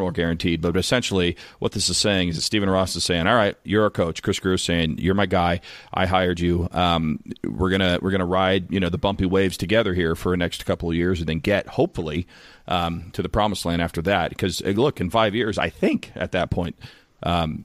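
No technical faults can be heard anywhere in the recording. The speech carries on without any audible disturbance at any point.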